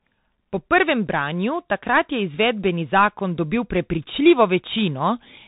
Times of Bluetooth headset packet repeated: none

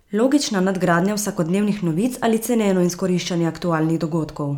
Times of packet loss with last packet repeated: none

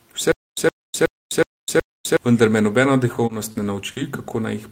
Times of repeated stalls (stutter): 3.13-3.98

